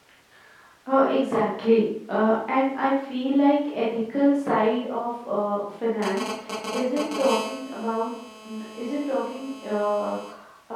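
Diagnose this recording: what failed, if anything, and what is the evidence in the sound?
The analogue stage is picking up a nearby 2G handset. From 6.02 to 7.22 s there are GSM signalling bursts: irregular galloping groups of short raspy buzzes, roughly as loud as the speech, repeating at 217 Hz within each group. A phone negotiating a connection transmits only in these brief clusters, and the audio circuit rectifies the radio pulses into audio. The broken dit-dit-dit rhythm sets this apart from the continuous buzz that follows.

From 7.26 to 10.29 s the pattern becomes a steady GSM phone buzz, about 14 dB below the speech. It is a hard, harmonic-rich 217 Hz rasp that runs under everything and ignores the speech. Once the call is up, the handset bursts 217 times a second without pause, so the rectified envelope becomes a continuous tone. The 217 Hz fundamental, rather than 50 or 60 Hz, rules out mains hum or a ground loop. 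The harsh, buzzy edge of the tone rules out a clean oscillation.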